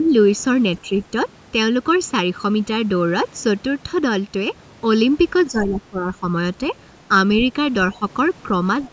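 One channel of this speech recording reaches the mono mix late by about 0.7 ms, so the summed channels cancel at evenly spaced frequencies starting near 700 Hz. This channel delay (comb filtering) runs throughout, leaving a hollow, phasey colour with fixed notches. Speech is also suppressed in double talk, likely because an echo canceller turned the near talker down while both sides spoke. The level dips by about 5 dB from 0.00 to 0.09 s, and by about 10 dB from 5.51 to 6.26 s and from 7.95 to 8.04 s, ducking the voice in those spans. In the opening dip, from 0.04 to 0.08 s, the other side's voice leaks through, likely echo left on the microphone after incomplete cancellation. It sits roughly 30 dB below the talker as a faint scrap.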